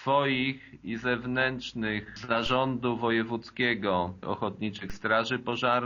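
At 2.46 s and again at 4.90 s the waveform's zero line jumps by about -28 dBFS in a DC step, then sags back as a 5 Hz high-pass drains it. Each is heard as a low thump, seen as a baseline shift and a thin full-height spectrogram line.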